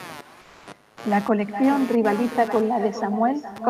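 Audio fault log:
Throughout, computer activity noise: a buzzy, chirping pulse train of roughly 150 Hz sits about 20 dB under the speech, riding the computer's load changes through a shared ground.
Throughout, echo with no canceller: every phrase returns roughly 400 ms later, about 12 dB down and thin, because the far end's loudspeaker feeds straight back into its microphone.
0.43–0.67 s, comfort noise in place of the background: for 240 ms the real background drops out for a flat, featureless hiss about 1 dB quieter, likely Opus DTX filling a pause.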